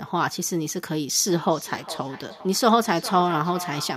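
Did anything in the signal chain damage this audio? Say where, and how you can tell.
Yes. Call processing: feedback echo between two devices, one microphone re-capturing another's playback; from 1.27 s, speech repeats roughly every 0.4 s, at up to 14 dB below the speech.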